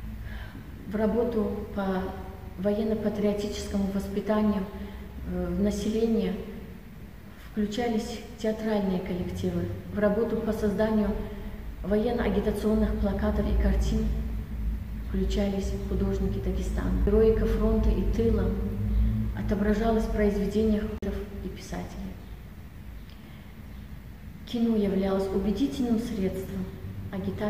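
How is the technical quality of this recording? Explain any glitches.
The recording has two playback glitches. Both are CD skips, at 17.06 s and from 20.98 to 21.02 s: the laser jumped tracks, muting briefly (about 40 ms the second time) before resuming elsewhere.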